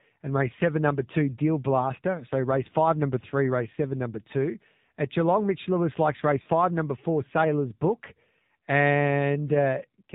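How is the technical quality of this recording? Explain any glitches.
The recording is clearly compressed, with one glitch.

The AMR narrowband mobile codec affects the whole clip. The speech is sampled at 8 kHz, so nothing above 4 kHz survives. The codec models the vocal tract and drives it with a few pulses per subframe. At this low rate the result is buzzy and synthetic. The damage is plainly audible, and it fits the 7.4 kbps AMR-NB mode.

Lost AMR speech frames cause a dropout from 6.42 to 6.48 s, right after "likes race" and before "number four". Radio errors corrupted the frames. The decoder then repeated the last good pitch and vocal tract settings at falling gain. About 40 ms of speech is replaced, consistent with two 20 ms frames. The sound smears and dips briefly, then returns rough for a moment.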